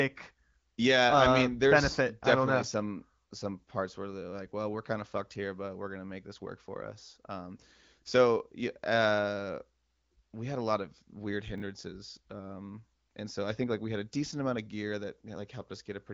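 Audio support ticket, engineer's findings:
Chunks out of order, 11.58–11.62 s, just after "a lot of weird". Short garbled jump with three hard joins; no audio missing. One 20 ms chunk plays a chunk late, behind its successor. Probable component: playback or jitter buffer writing frames out of sequence. Heard through an AMR-WB-type band limit, no content above about 7.6 kHz, light codec texture consistent with a mid-to-high bitrate.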